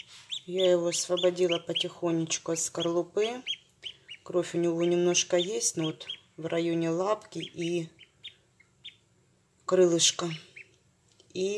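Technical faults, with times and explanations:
No technical faults are audible.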